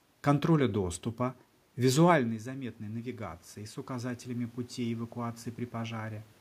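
From 2.44 s to 6.34 s the voice and the room noise behind it swell up together, slowly, by about 7 dB. This is automatic gain rising: once the talker moved back around 2 s, the input fell by about 12 dB, and the gain control climbed gradually to compensate.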